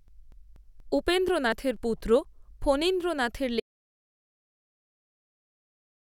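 From 0.08 to 2.25 s, periodic USB or driver dropouts skip about 10 ms of speech every 0.24 s, giving regular ticks. The waveform and spectrogram show evenly spaced splice discontinuities. At 3.6 s an audio dropout to silence cuts the speech off through the end, likely from a lost input. The waveform is flat, and the spectrogram is blank with no room tone.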